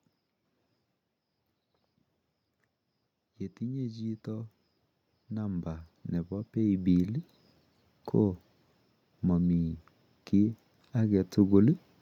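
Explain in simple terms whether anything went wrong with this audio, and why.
Automatic gain rising, at 3.31 to 4.57 s and again at 10.32 to 11.87 s: the recording level control slowly turned itself up, so voice and background swell together.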